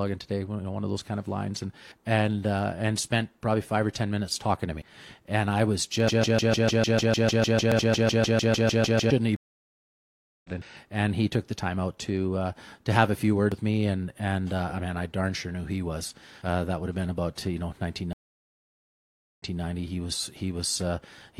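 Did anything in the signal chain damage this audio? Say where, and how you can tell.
Yes. At 4.82, 7.72, 10.62 and 13.52 s the speech skips forward, each time dropping roughly a tenth of a second and butting the two sides together without a gap. The regular spacing, one 3 s block after another, points to audio missing between chunks, likely at a buffer or recorder handing over fixed blocks.

From 6.08 to 9.10 s a 150 ms fragment repeats back to back, 21 times, and whatever should have played there never arrives. That stuttering broken-record loop likely comes from a stalled player, encoder or stream that kept resending its last buffered piece.

Two dropouts show a stream reconnect at the network stage. From 9.36 to 10.50 s there is about 1.08 s of silence, and the speech resumes roughly a second further on. From 18.13 to 19.61 s a 1.35 s silence ends with a 0.23 s stretch replayed, as a resent burst would cause.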